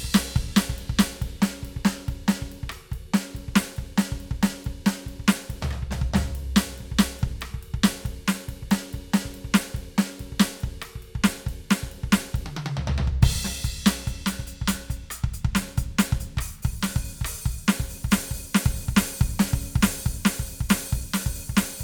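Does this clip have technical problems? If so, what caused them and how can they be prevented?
No, this music recording carries no technical faults, so there is no cause to trace and nothing that needs preventing.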